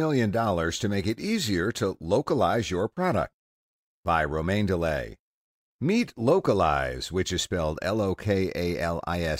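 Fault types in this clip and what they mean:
No faults are audible anywhere in this recording.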